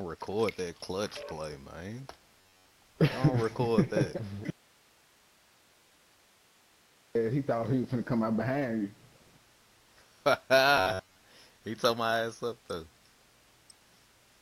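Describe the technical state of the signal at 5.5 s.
At 5.5 s the signal is in an audio dropout to a faint residue, running from 4.50 to 7.15 s. The wanted sound is likely lost upstream while the path stays live, leaving only hiss about 35 dB down. The abrupt cut, with no fade, marks it apart from a pause.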